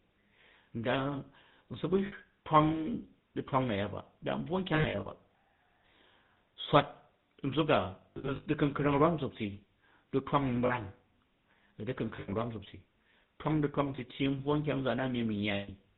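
GSM full-rate codec coloring runs through the whole speech clip, which fits a 13 kbps GSM coder. A vocal-tract model driven by sparse, evenly spaced excitation pulses replaces the real waveform, and nothing above 4 kHz survives. The result is a clearly audible buzzy, gravelly roughness and a dull top end.

Lost GSM frames break in at 2.06–2.13 s, 4.74–5.07 s, 8.10–8.47 s (after "swat nzuk a", before "du̱kunkrang rwam nzut ti"), 10.66–10.73 s, 12.16–12.33 s (before "rwam nzukti"), 13.96–13.99 s (after "twamg du̱twang") and 15.54–15.71 s. During each gap the decoder repeats the last good frame, so the sound freezes into a rough, metallic ring. The longer spans are scattered dropouts, with runs up to about a tenth of a second.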